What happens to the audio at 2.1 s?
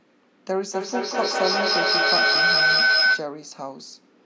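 At 2.1 s a feedback howl is sounding. It runs from 0.74 to 3.32 s. A loudspeaker is feeding the microphone, and each pass round the loop gains level. It narrows to a whistle near 1.5 kHz, with the loop repeating about every fifth of a second, peaking about 8 dB above the speech.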